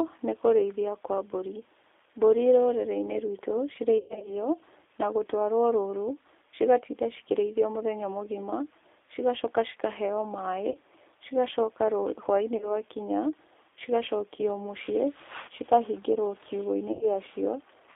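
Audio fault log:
Throughout, G.729 codec: The band runs only from about 300 Hz to 3.6 kHz. The speech is rebuilt from a vocal tract filter, a pitch predictor and a few pulses per frame, so it sounds rough and synthetic. The damage is plainly audible and fits an 8 kbit/s G.729A link.
3.98–4.32 s, 10.71–10.77 s, 12.57–12.76 s, 14.36–14.41 s, 16.92–17.09 s, VoIP packet loss concealed by the speech codec: Gaps of speech are filled by extrapolating the last pitch and filter at falling gain, giving a short buzzy or noisy smear. The first is worst, with 180 ms missing across 240 ms and a longest gap of 120 ms. The last loses 90 ms, and the others 30 ms each. Speech stays weak briefly after each gap.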